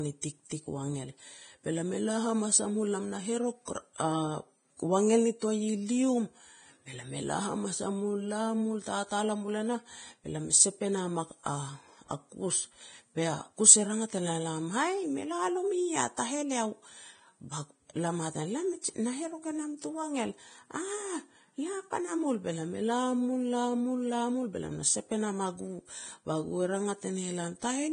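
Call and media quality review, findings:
Hissy, grainy treble throughout, nothing above 9.7 kHz, roughened speech texture and blurred consonant attacks. Likely Vorbis compression at heavy damage, with a bitrate that fits around 22 kbps. Unlike plain low-pass filtering, the remaining treble is noisy rather than clean.

Short hiss at 16.17 s, smearing an attack forward by about 15 ms. Pre-echo from the transform codec, with quantisation noise spread across the block before a late, sharp onset. It differs from a click or dropout because it comes before the attack and sounds like a soft, dull onset.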